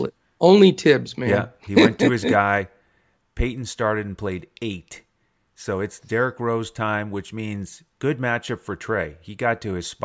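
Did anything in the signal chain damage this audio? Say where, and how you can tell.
No, nothing in the signal chain damaged this audio, and I can't point to any stage where harm shows up.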